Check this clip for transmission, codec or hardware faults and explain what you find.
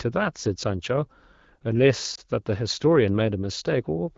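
One transmission fault stands out: a lost AMR speech frame between 2.15 and 2.20 s. The loss is a single 20 ms frame that failed its radio checksum. The decoder filled the slot by repeating the previous good pitch and vocal-tract parameters at reduced gain, so the audio shows a short dip or warble. It does not show a hard gap or click. That soft, smeared gap is what separates it from a plain dropout or a clipped packet. The clear AMR wideband (HD Voice) coding fits 12.65 kbit/s.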